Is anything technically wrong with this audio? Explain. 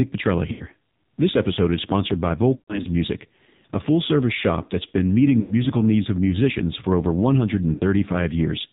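Yes. The whole clip has been through the AMR narrowband mobile codec at a heavy level of compression. The codec samples at 8 kHz and rebuilds speech from a vocal-tract filter excited by a handful of pulses, so nothing above 4 kHz survives. The buzzy, synthetic edge on the voice points to one of AMR-NB's lowest modes, around 6 kbps, where too few pulses are coded to carry natural detail.

There are also four bursts of lost AMR speech frames, at 0.52 to 0.66 s, 2.56 to 2.87 s, 5.40 to 5.55 s and 7.74 to 7.83 s. When frames arrive corrupted, the decoder repeats the last good pitch and filter settings at falling gain, so the sound smears and fades instead of cutting off. The longest gap follows "episode is sponsored by". About 160 ms are missing across 280 ms there, with the longest unbroken stretch lasting 120 ms. The 100 ms gap falls between "shop that's been meeting" and "needs of musicians for". 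The other two gaps last 80 ms and 60 ms.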